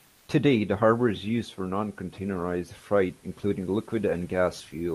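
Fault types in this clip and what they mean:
Comfort noise in place of the background: from 0.05 to 0.27 s, the room background, about 38 dB below peak speech, becomes a steady, featureless hiss at unchanged level, likely receiver-generated while transmission paused. Spectrograms show a smooth, uniform band; the waveform, an even, low floor.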